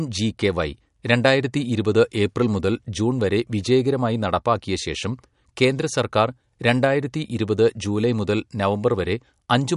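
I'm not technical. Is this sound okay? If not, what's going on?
No. All the way through, the speech sounds watery and swirly, with a metallic edge on s sounds. Nothing above about 11.2 kHz survives, so it sounds dull. This is likely MP3 compression, which drops detail it thinks you won't notice.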